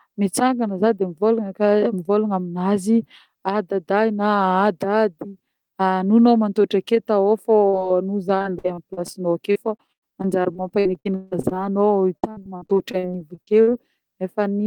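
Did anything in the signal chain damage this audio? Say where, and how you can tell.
Yes, the network stage. Short concealed packet loss at 7.69 to 7.75 s and 7.79 to 7.82 s: brief smears where the decoder stretched the last sound over 40 ms and 20 ms holes.

Then repeated packet loss with robotic sound from 8.38 to 9.16 s, 9.52 to 11.57 s and 12.17 to 13.69 s. Holes up to 159 ms kept getting patched, roughly a quarter of each stretch, so it turns choppy.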